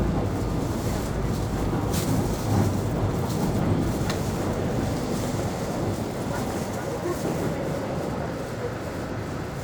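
No technical faults to report: the sound runs intact with nothing broken, dropped or disturbed along the signal path.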